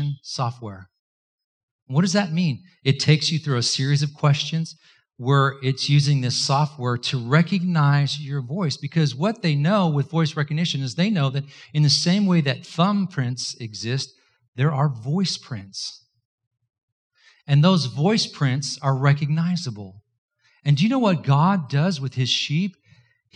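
A short recording of speech, with no technical fault to be heard anywhere in it. There are no times or causes to report.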